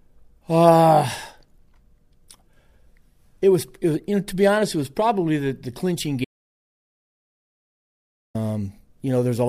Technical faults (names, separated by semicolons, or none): audio dropout to silence